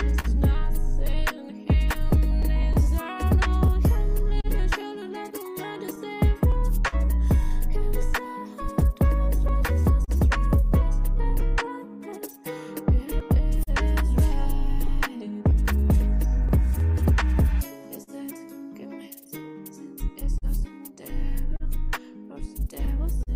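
Throughout, clock drift between sender and receiver, with the sender running roughly 3% slow, leaves recurring timing hiccups at uneven intervals, visible as small stutters in the waveform.

From 0.19 s to 23.30 s come scattered short gaps: about thirty brief holes, none much over 50 ms, patched by continuing the last sound. They show as smeared spectrogram columns and sound like ticks.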